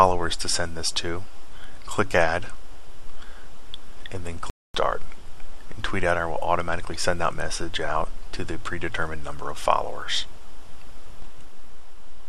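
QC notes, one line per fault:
4.50–4.75 s, playback stall: the player likely ran short of buffered data or had its output thread blocked, so nothing was sent to the output for about 246 ms. The sound cuts off abruptly mid-flow, leaving a clear stretch of silence before audio returns.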